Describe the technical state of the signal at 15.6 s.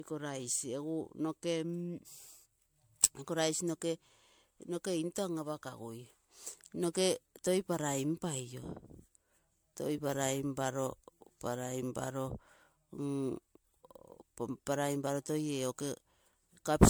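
At 15.6 s the speech carries generation loss, present throughout the clip. It sounds swirly, hollow and smeared, with blurred attacks. The likely cause is about five rounds of MP3 re-encoding near 96 kbit/s.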